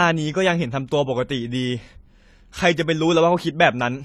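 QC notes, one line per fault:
Throughout: transcoding between lossy codecs. The speech carries two sets of coding artefacts at once. The top end is dull and cut off. This is likely a low-rate AAC encode re-encoded as HE-AAC, which adds its own synthetic treble.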